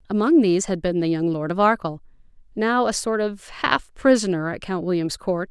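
No faults detected anywhere in the speech recording.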